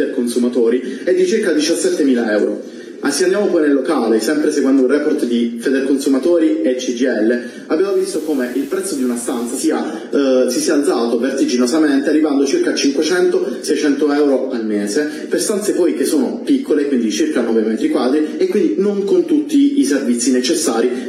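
The audio has one fault: digital radio blending to analogue, from 7.80 s to 9.76 s. The receiver loses its digital signal and cross-fades to the FM broadcast of the same station, then fades back. Each blend takes about 0.3 s. On the FM side the level drops by about 4 dB. Hiss rises to roughly 25 dB below the signal. The hiss clears when the digital stream returns.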